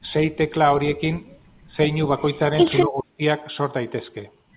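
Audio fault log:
1.67–1.73 s and 2.85–3.21 s, speech suppressed in double talk: the speech level drops sharply, a brief dip of about 10 dB, then a deeper cut of about 30 dB lasting about 0.4 s, likely from an echo canceller damping the near talker while the far side spoke.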